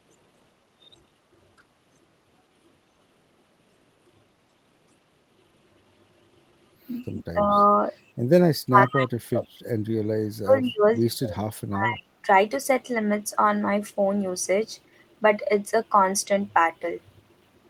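Speech suppressed in double talk occurs at 7.23–7.55, 8.47–9.6, 10.08–10.94, 11.1–11.46 and 11.69–12.26 s. Each time the voice sinks by roughly 25 to 40 dB, likely because an echo canceller turned it down while the far side was also talking. Packet-loss dropouts leave brief gaps, but these are sustained dips lasting up to about a second.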